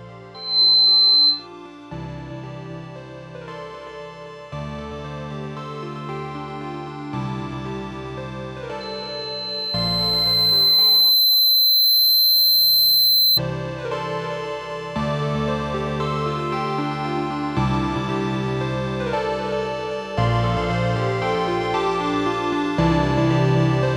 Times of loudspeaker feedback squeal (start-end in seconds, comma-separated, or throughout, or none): 0.34-1.47, 8.80-13.40